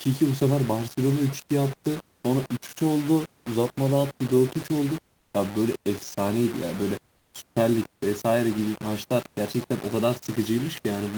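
From start to finish the speech is coarse and grainy, with a harsh distortion that rises and falls with the voice. The likely cause is low bit depth without dither. The audio appears to be rounded to about five bits, so the error tracks the signal rather than sitting as a steady hiss, and it lands only roughly 15 dB below the speech. Quiet tails crumble or drop to silence. On a waveform, the low-level stretches show visible staircase steps. A spectrogram shows distortion smeared across the band, switching on and off with the speech.

At 5.19 to 5.33 s, and again at 7.17 to 7.33 s, short pauses of 140 ms and 160 ms lose their real room background. The background here is the ordinary room noise, sitting about 45 dB below the loud parts. In these gaps it is replaced by comfort noise in place of the background: a flat, featureless hiss about 2 dB quieter. This fits a discontinuous-transmission scheme such as Opus DTX synthesising noise while no speech is detected. 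On a spectrogram, each gap appears as a smooth, uniform patch with the background's fine texture gone. The waveform shows a slight dip in the noise floor.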